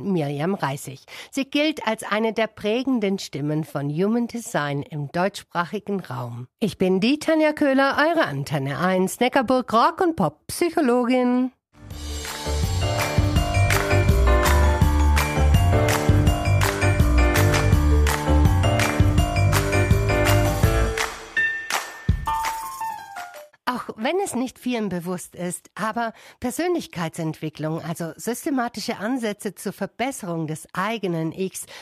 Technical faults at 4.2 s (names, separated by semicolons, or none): none